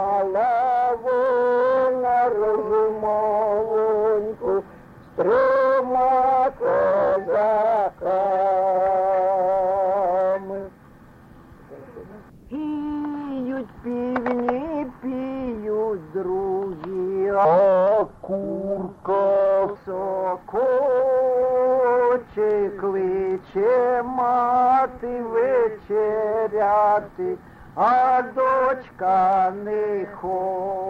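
A section at the wrong speed runs from 17.45 to 19.76 s, most likely from that stretch being played against the wrong clock at about 0.75 times its original rate. The audio there turns slow and deep, dropping roughly five semitones, then snaps back to normal pace and pitch.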